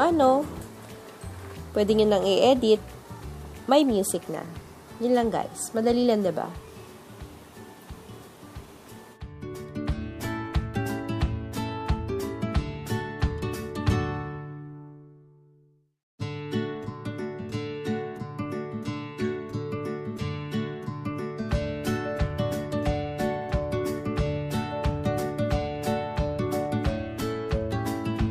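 Channel delay (comb filtering) runs from 13.96 to 17.53 s. One channel lags the other by about a single sample, roughly 0.02 ms, before the two are summed to mono. The first cancellation notch sits near 20 kHz, so the top end sounds softened and dull.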